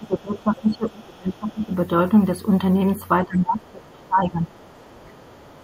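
It's a speech clip, and the talker gets pushed down hard from 0.00 to 1.73 s, 3.25 to 4.53 s and briefly 4.92 to 5.11 s, dipping about 20 dB in the first two and about 15 dB in the last, likely speech suppressed in double talk by the echo canceller. From 4.56 s to the end there's a very faint second voice underneath, likely the other side's voice leaking through from the loudspeaker.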